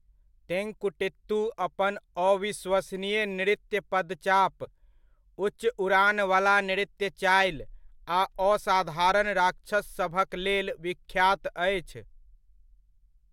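Just after "अपन अविश्वसनीय नृत्य पदचाप", from 4.64 to 4.67 s, the speech skips forward with a brief garbled glitch. This is likely a broken MP3 bit reservoir: after a cut, a frame found another frame's bytes where its borrowed data should be, and the roughly 30 ms disturbance fits a single 26 ms MP3 frame.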